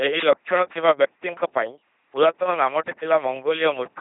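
From the first moment to the last, the speech runs through an LPC-10 vocoder, and it's heavily mangled. It has that buzzy, robotic character you get when every instant is forced to be either a pulse-train buzz or a noise hiss driving a small all-pole filter. Where that voiced/unvoiced call misfires you hear stray buzz or hiss. Nothing survives above 3.8 kHz, and the harshness fits a 2.4 kbit/s stream.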